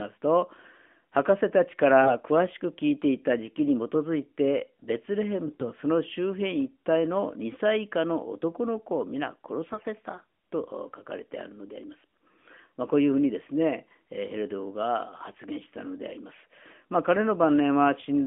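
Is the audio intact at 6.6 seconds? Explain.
Yes, the speech at 6.6 seconds is intact, heard through the narrow telephone band of an AMR-NB mobile codec at 12.2 kbps, which is working normally there.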